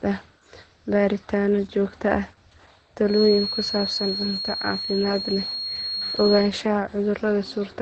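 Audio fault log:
throughout: Opus voice compression. The speech runs through Opus's SILK linear-prediction coder in wideband mode, so nothing is heard above about 8.5 kHz. The coarse excitation coding, which fits a bitrate near 12 kbps, leaves it plainly muffled, hoarse and slightly robotic.
3.03 to 6.54 s: feedback whistle. A thin, steady tone at 4.3 kHz sits only a little below the speech and swells and fades slowly in level. It is likely a loudspeaker-to-microphone loop held right at the edge of feedback, sustaining one frequency without running away.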